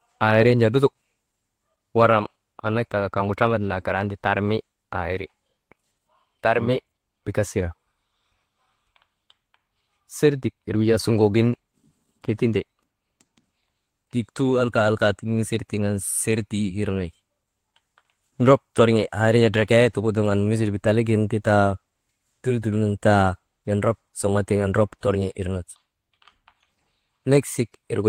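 No faults turn up anywhere in this recording; nothing calls for attention.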